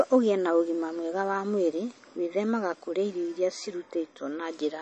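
From start to end the speech sounds watery and swirly, with smeared attacks, and nothing is heard above about 8.3 kHz. The likely cause is MP3 compression at a starved bitrate, fitting around 32 kbps, cutting the treble and toggling weak frequency lines between frames.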